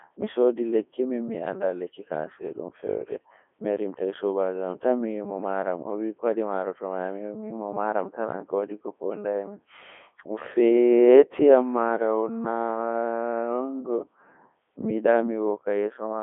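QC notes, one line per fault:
Throughout, Codec 2 vocoder: robotic, buzzy speech with nothing above 3.6 kHz, as the voice is rebuilt from sine waves; this fits the 3.2 kbit/s mode.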